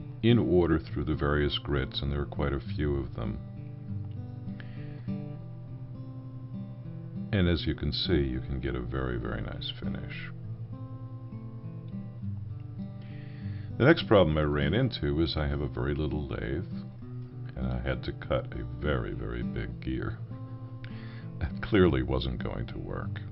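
You get two short blips in this audio, at 5.41 s and again at 8.15 s, each only about 10 ms long. Both are damaged data in a compressed stream: bytes in the encoded file got lost, zeroed or overwritten, so the decoder misreads those frames, loses sync and has to hunt for the next valid frame header. That brief stumble is what comes out as the short glitch you hear at each spot.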